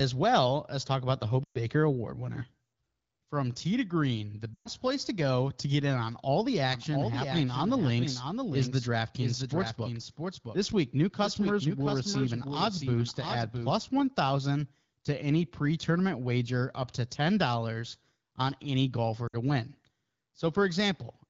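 At 1.44 to 1.58 s, after "as talk about the", and at 4.54 to 4.69 s, between "tea to green the" and "place to go to", lost AMR speech frames cut 120 ms of speech, which fits six 20 ms frames. The decoder smears the last good frame and fades quickly to silence, then speech returns briefly rough.

From 6.72 to 13.72 s a doubled audio track runs: a dry, full-band copy about 5 dB down trails the original by roughly 0.7 s, starting and stopping abruptly. Likely cause is a second capture path or misaligned edit.

At 19.28 to 19.36 s, after "on any", another lost-frame gap of 60 ms drops quickly to near silence, against light AMR-WB coding at 12.65 kbit/s.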